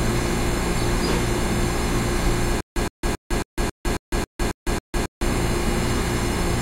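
A recording of sounds that develops a stutter with silent gaps from 2.61 s to 5.22 s. Across that span a 117 ms fragment of audio repeats nine times at a steady 272 ms period, each repeat followed by about 155 ms of dead digital silence. The likely cause is a stalled player or stream that replays its last buffered fragment on each retry and then runs dry. Whatever sound belonged in that stretch is missing.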